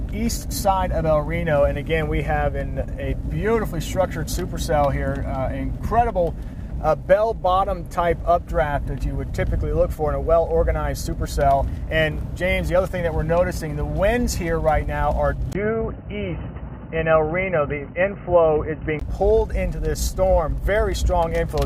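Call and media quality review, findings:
Input switched to a poorer device, 15.53 to 19.01 s: 20 ms dropout at switch, then dull, boxy, band-limited sound with nothing above 3 kHz. Level unchanged; faint new noise floor. Likely capture-path change to headset call profile or secondary mic.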